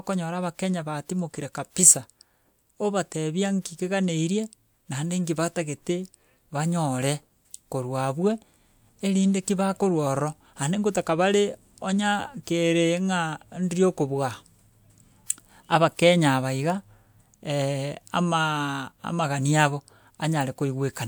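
Speech recording with no audible technical faults.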